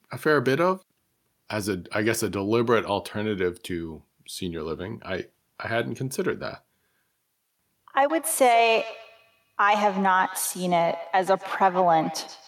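From 8.09 s to the end, feedback echo between two devices appears. Another device replays the speech, and this microphone recaptures it. Repeats come roughly every 150 ms, up to about 14 dB below speech.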